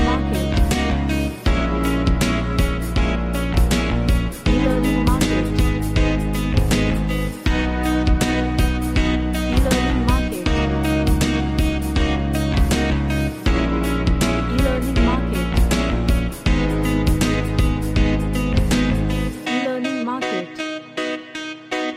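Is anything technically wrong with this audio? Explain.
Yes. From 17.58 s to the end there is channel delay (comb filtering). One channel lags by about one sample, and the mono sum cancels near 20 kHz, dulling the top end.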